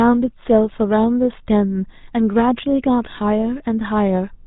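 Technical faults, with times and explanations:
Throughout, GSM full-rate codec: the speech is band-limited below 4 kHz and carries a plainly audible buzzy, gravelly roughness, which fits a 13 kbps GSM full-rate stream. It models the vocal tract and excites it with regularly spaced pulses, discarding two of every three excitation samples.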